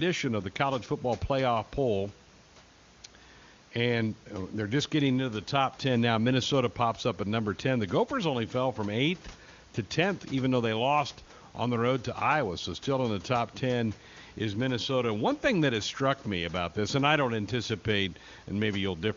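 No technical faults can be heard in this speech recording: the room's background noise sits about 24 dB below the voice, and the AMR wideband (HD Voice) coding leaves at most faint traces, consistent with one of its higher bitrates.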